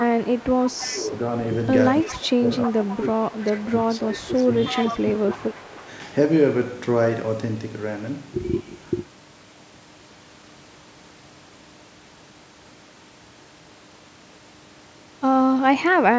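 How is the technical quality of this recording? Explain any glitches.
The recording has two call-path faults in its first six seconds: an echo leak and speech suppressed in double talk.

Echo leak: at 0.0 to 1.0, 2.06 to 2.19, 2.63 to 3.01, 3.32 to 3.49, 4.66 to 4.99 and 5.32 to 5.37 s. A faint copy of the speech returns 319 ms late. It sits about 10 to 25 dB below the main speech. The likely cause is a loudspeaker on the far end. Its echo canceller missed part of the sound its microphone picked up.

Speech suppressed in double talk: at 0.86 to 1.12 s and 2.03 to 5.87 s. The speech dips by about 10 dB, then by about 15 dB. This totals roughly three seconds. It overlaps the echo bursts. The echo canceller likely could not tell speech from echo, so it turned both down.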